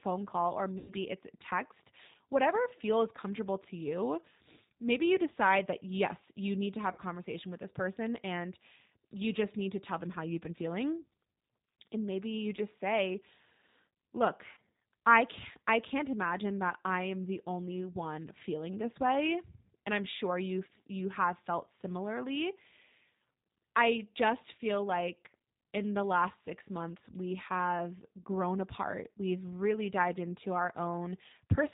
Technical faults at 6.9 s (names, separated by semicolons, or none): G.729 codec; VoIP packet loss concealed by the speech codec